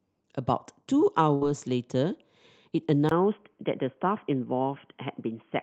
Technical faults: burst of packet loss; input switched to a poorer device

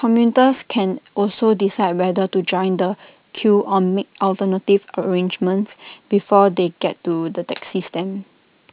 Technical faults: aliasing

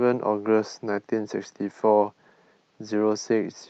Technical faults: none

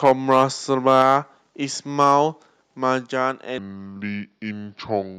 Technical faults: microphone overload; microphone volume stepped down; section at the wrong speed

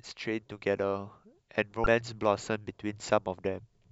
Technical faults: damaged data in a compressed stream

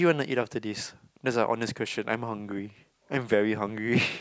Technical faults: none

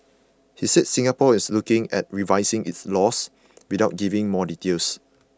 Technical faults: none

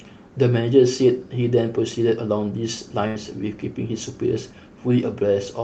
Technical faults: burst of packet loss

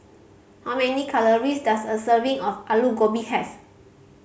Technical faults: none

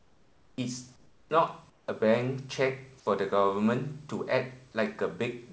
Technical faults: comfort noise in place of the background

